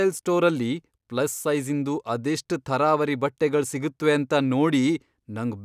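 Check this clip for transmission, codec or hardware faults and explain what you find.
Nothing in the speech signal points to a transmission, codec or hardware problem, since it stays continuous and steady in level and bandwidth throughout.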